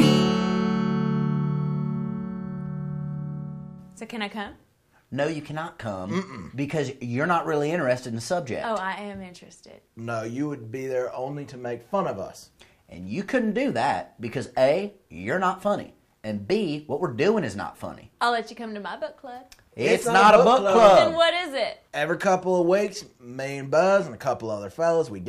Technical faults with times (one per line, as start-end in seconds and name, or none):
none